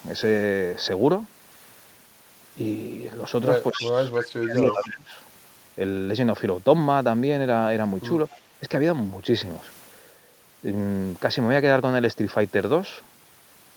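A speech clip with two related echo-canceller faults. From 3.72 to 5.13 s, the talker's level drops in pieces, by roughly 20 dB at the deepest. About a second of that span is affected. This is likely speech suppressed in double talk. The canceller could not tell the local voice from the returning far-end sound, so it turned both down. Echo leak overlaps the same stretch. A copy of the speech, delayed by 274 ms and about 10 dB below it, breaks through at 3.73 to 3.81 s, 4.16 to 4.27 s and 4.56 to 4.96 s. A much weaker scrap, about 30 dB down, follows at 8.3 s. These short repeats fit residual loudspeaker pickup that the canceller failed to remove and sent back.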